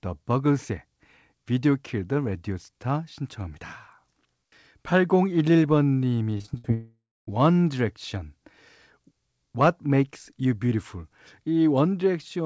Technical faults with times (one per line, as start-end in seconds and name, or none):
6.38-6.66 repeated packet loss (robotic sound)
6.74-7.29 long network dropout